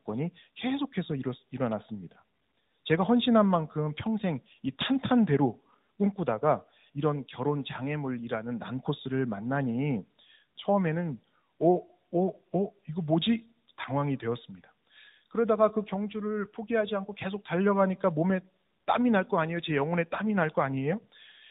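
Speech passed through tandem speech coding, decoded and re-encoded across links, likely G.726 then AMR-NB, so it sounds rough, muffled and warbly throughout, with nothing above 3.8 kHz.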